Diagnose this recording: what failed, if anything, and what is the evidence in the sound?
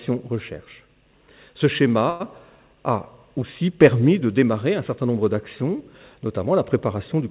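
Short stall from a late packet, 2.1 to 2.22 s, at the network and jitter-buffer stage. For roughly 0.1 s the sound is held, a sustained stretch with a slight buzz or dip, and then it resumes exactly where it stopped, with nothing skipped. A packet arrived late, the jitter buffer ran dry, and the receiver extended the last audio until the packet arrived. Everything afterward plays about 99 ms later. Nothing passes above 4 kHz, which fits a G.711 mu-law call codec.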